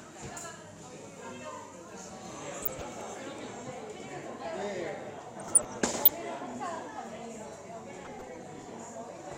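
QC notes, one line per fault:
2.62–2.85 s, 5.40–6.21 s, 8.02–8.65 s: DAB burbling. Weak reception lets bit errors slip past error correction, corrupting MP2 audio samples, so short blips of noise appear in single sub-bands.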